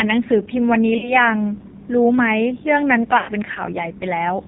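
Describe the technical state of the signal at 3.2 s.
At 3.2 s the signal is inside a burst of lost AMR speech frames, 3.18 to 3.31 s. The decoder extends the last good pitch and vocal-tract settings with falling gain, so the sound stretches and fades, consistent with about five missing 20 ms frames. Throughout, AMR narrowband mobile codec damage is heavy, with nothing above 4 kHz and a buzzy, synthetic quality that points to a low rate near 5.9 kbps.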